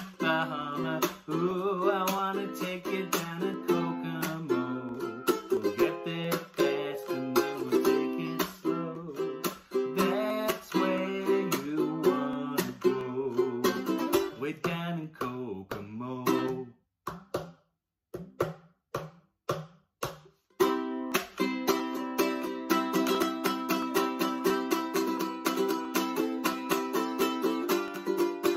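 Two devices likely running on separate clocks, drifting apart by around 500 ppm, force the buffer between them to drop or repeat a small block of samples every 0.68 s. These clock drift buffer slips come through as a steady click, about forty of them from 0.16 s to 28.55 s.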